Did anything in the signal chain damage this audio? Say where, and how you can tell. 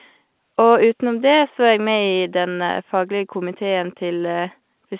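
No, nothing in the chain damaged this speech.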